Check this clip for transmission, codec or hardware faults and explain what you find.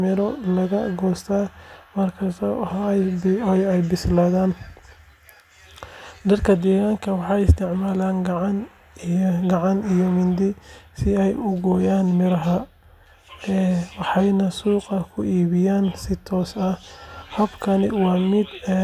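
The speech signal shows no transmission, codec or hardware faults that can be heard, with steady level, continuous audio and an intact frequency range throughout.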